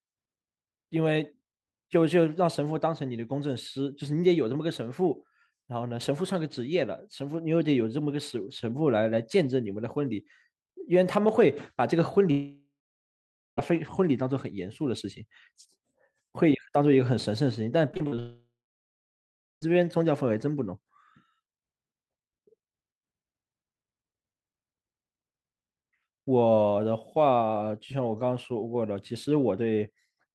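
At 12.31 s the speech smears into a fading buzz and then goes silent for about 0.8 s before returning at 13.59 s, with roughly 1.3 s of it gone. This is a long network dropout, likely a stall in arriving audio. The receiver stretched the last sound until it had nothing left to extend.

From 17.91 to 18.19 s the speech turns choppy. Six short holes, the longest 40 ms, are patched by extending the previous sound, covering about 38% of that span. This is repeated packet loss (robotic sound).

Straight after, at 18.19 s, a second long network dropout begins. Again a fading buzz gives way to about 1.1 s of silence. Speech resumes at 19.73 s, with about 1.4 s lost, likely from another interruption in delivery.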